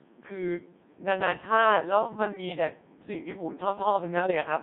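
From the start, the speech passes through the Codec 2 vocoder at about 1.6 kbit/s, confined to roughly 150 Hz to 3.7 kHz. Only pitch, voicing, energy and envelope survive, so the decoder rebuilds the voice from sine waves. The result is heavily robotic and buzzy, unlike a waveform codec's smeared or watery artefacts.

From 4.2 to 4.33 s, bit errors on digital voice radio strike. Corrupted parameters, with around one bit in twenty flipped, set pitch, level and timbre wrongly for a burst that fits about three frames. The voice lurches into a bleeping, warbling garble rather than falling silent as a dropped packet would.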